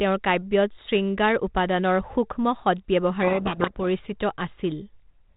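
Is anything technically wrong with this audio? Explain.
Yes. From 3.22 to 3.85 s there is a codec payload misread. The receiving end unpacks the G.726 code words with their bits in the wrong order, so each 4-bit difference value decodes to the wrong step and throws the adaptive predictor off. For that stretch the speech is buried under harsh, grinding distortion, and the narrowband telephone sound of the 32 kbit/s G.726 link returns once the packing agrees again.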